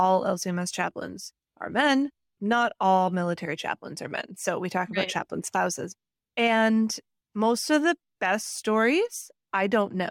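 No technical faults can be heard in the speech at any point.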